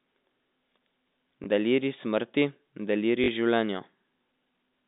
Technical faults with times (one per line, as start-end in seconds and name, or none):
1.44-1.46 packet loss with last packet repeated
3.24-3.28 packet loss with last packet repeated